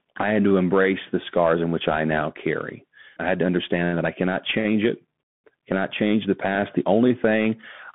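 Throughout the clip, the speech has been carried over a Bluetooth CVSD headset codec. The link encodes one bit per sample, a bare up-or-down decision with an adapting step, which fits a 64 kbit/s CVSD stream. The band is squeezed to roughly 150 Hz to 3.5 kHz, so the voice sounds thin and boxed in. The coarse step leaves a plainly audible granular hiss, sibilants turn scratchy, and louder bright syllables smear into distortion.

At 6.55 s, just after "change the", there is unconcealed Bluetooth headset packet loss. A single voice packet between headset and phone went missing, and nothing was done to cover it, so about 3.8 ms of signal is simply absent. That leaves a tiny hole with hard edges.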